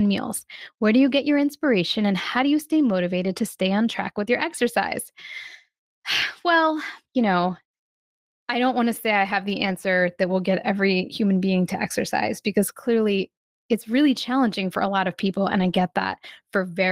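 Lost packets were rebuilt from error correction, with the decoder substituting the low-bitrate copies carried in the following packets. Each patch sounds briefly rougher and noisier, without a gap. It happens four times. At 3.23 s, just after "how do you stay", about 40 ms is affected, which points to two lost packets. At 9.65 s, after "say I have the", another 40 ms is affected. At 10.49 s, a single 20 ms frame is rebuilt. At 15.59 s, after "a lot of people", the longest patch of 120 ms fits about six lost packets.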